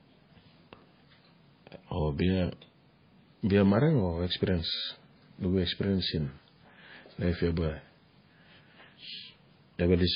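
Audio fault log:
Throughout: low-bitrate audio saved at a high bitrate. The speech cuts off sharply at 5 kHz and smears despite the large file, likely from an earlier very low-bitrate MP3 pass.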